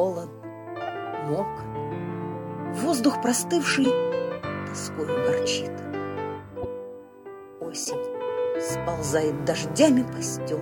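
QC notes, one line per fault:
Throughout: USB whine, a steady fixed-pitch tone at 8 kHz with its strongest component at 16 kHz, sitting around 45 dB below the program. Bus current drawn in 125-microsecond microframes leaks through power or ground. On a spectrogram it shows as thin, unbroken horizontal lines.
0.87–0.89 s, 3.70–3.86 s, 5.44 s, 6.62–6.66 s, 7.83–7.95 s: corrupt frame decoded. Damaged compressed frames were played anyway, so energy lands at wrong frequencies, giving brief chirps and blips. The loudest is near 3.7 s and the faintest is at 5.44 s. On a spectrogram they appear as short vertical smears, and on the waveform as brief bursts.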